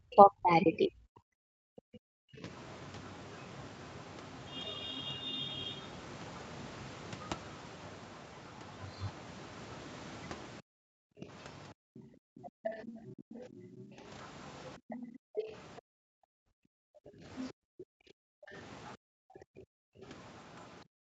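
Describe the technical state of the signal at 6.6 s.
Other side's voice leaking through, from 3.58 to 20.67 s: a faint second voice sits well below the main speech, likely loudspeaker echo the echo canceller failed to fully remove.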